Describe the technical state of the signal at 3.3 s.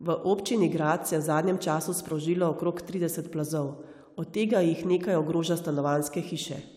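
At 3.3 s the speech signal is intact, with no audible technical fault at that moment.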